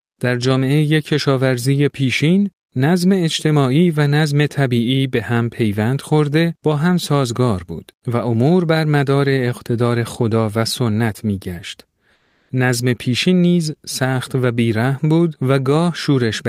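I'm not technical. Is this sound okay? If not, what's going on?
No. From 12.13 to 12.49 s, comfort noise replaces the background: a smooth, quieter hiss, not true silence like a dropout, likely because the sender paused transmission.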